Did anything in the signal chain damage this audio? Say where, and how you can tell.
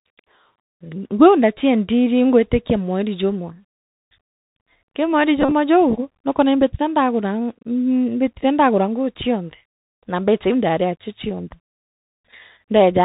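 Yes. At the codec stage, the Bluetooth CVSD headset codec runs throughout. Nothing passes above 4 kHz, s sounds turn scratchy, and a granular hiss sits underneath. Unlike plain telephone band-limiting, this fits CVSD's 64 kbps one-bit delta stream.

On the wireless link, Bluetooth headset packet repeated occurs from 5.42 to 5.52 s. Instead of the silence a dropout would leave, a buzz near 267 Hz appears as stale packets replay every 3.75 ms, in runs of up to roughly 40 ms.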